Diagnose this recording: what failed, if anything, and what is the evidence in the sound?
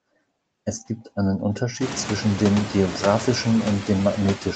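What failed is the noise suppressor in the call processing chain, and its artifacts run through the whole clip. The background bed gets pulled down by about 21 dB frame by frame, so it drops away in the gaps and creeps back up under the speech. Once the room noise jumps by about 24 dB around 2 s, it still sits about 10 dB below the speech.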